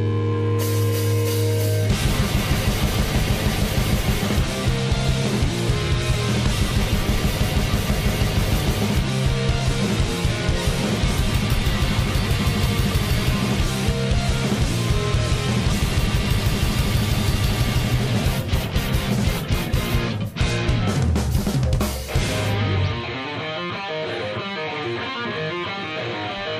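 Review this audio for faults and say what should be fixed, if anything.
No faults; nothing to fix.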